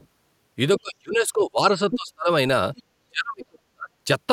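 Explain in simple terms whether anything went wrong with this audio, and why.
Two kinds of problem can be heard, both linked to the person's device playing the other side of the call out loud.

First, there is the other side's voice leaking through. Brief scraps of a second voice slip in at 0.0 to 0.07 s, 1.91 to 1.96 s and 2.76 to 2.83 s. The first and last scraps are faint. The one near 1.91 s is almost as loud as the main speech. The likely cause is an echo canceller that missed some of the loudspeaker sound picked up by the microphone.

Second, there is speech suppressed in double talk. From 0.8 to 2.29 s, and again from 3.01 to 3.9 s, the main speech sinks sharply. In the second stretch it nearly vanishes. Here the other side was likely playing on the loudspeaker while this person talked. The echo canceller likely could not tell the real speech from the echo, so it turned everything down together.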